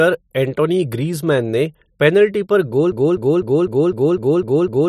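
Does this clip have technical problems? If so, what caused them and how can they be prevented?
Yes. At 2.92 s, just after "ने पेनल्टी पर गोल", a broken-record loop starts: a 0.25 s fragment repeats exactly, back to back, eight times until the end. The stream likely stalled and kept resending its last buffer, so the audio due in that span is lost. Stall detection that outputs silence instead of reusing stale buffers prevents it.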